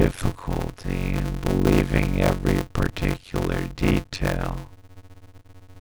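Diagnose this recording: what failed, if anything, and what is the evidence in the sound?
A block size mismatch (padded) in the driver or buffer stage. The speech carries a steady buzz at about 92 Hz from start to finish and drags at roughly half speed (0.533×) with its timbre intact. That fits 256-sample writes zero-padded into larger reads.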